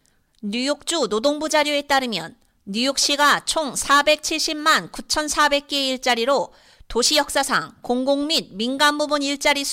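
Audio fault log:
The speech signal shows no audible technical fault anywhere in the recording.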